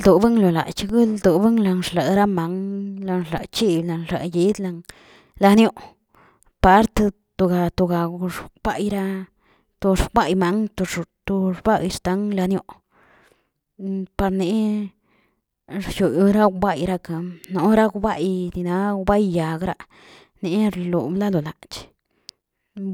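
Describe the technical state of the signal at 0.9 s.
At 0.89 s the zero line of the waveform jumps abruptly: a DC step of about -21 dBFS, the kind of offset that appears when a converter recalibrates or an input carrying its own bias is switched into the path. The offset doesn't hold; a 20 Hz high-pass bleeds it away, so the baseline drifts back toward zero afterward. The sudden shift is heard as a single low thump or click, while the speech itself continues unchanged through it.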